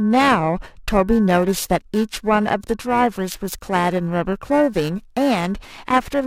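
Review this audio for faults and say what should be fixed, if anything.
Periodic clock jitter runs through the whole of the speech. Interference is wobbling the converter's sampling clock at a steady rate of around 1.5 kHz, so each component of the sound picks up paired sidebands at that spacing either side of it. Higher-frequency content is hit harder, giving sibilants and upper harmonics a rough, metallic edge that disappears in the pauses. Random jitter would instead add a diffuse noise floor, not discrete sidebands. To prevent it, isolate the converter's clock from the interference source with proper shielding, grounding and a clean clock supply.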